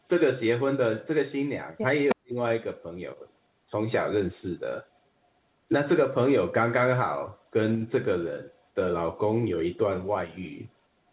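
Echo leak at 2.09–2.15 s: a brief delayed copy of the speech arrives about 310 ms late and only about 5 dB below it, likely loudspeaker pickup the far-end echo canceller failed to remove. Speech suppressed in double talk follows at 2.14–2.36 s, with the speech falling away by roughly 40 dB, and again at 3.66–3.73 s with a shallower dip of roughly 10 dB. Both are likely the canceller mistaking the talker for echo while both sides spoke. Throughout, nothing is heard above 4 kHz, which fits a narrowband G.711 call path.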